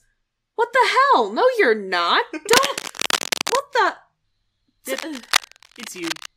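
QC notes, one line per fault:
2.52–3.59 s, cable scratch noise: Just after "you're not", dense, uneven scratching rides over the speech for about a second. It sits only a little below the speech level. A worn cable or connector being moved likely caused it, as its contact resistance jumped rapidly.
4.91–6.27 s, cable scratch noise: A second burst of rustling, crackly noise runs for about 1.4 s, to near the end of the clip. It is quieter, around 10 dB under the speech. Again a shifting, poorly seated contact is the likely cause.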